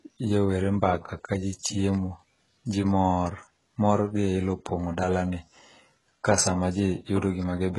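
Throughout the speech, the treble sounds synthetic and smeared. The s sounds are gritty and lispy, and nothing reaches above 11.5 kHz. This is likely heavy HE-AAC compression. The upper band is rebuilt from copied lower bands, which fits a very low bitrate near 12 kbps.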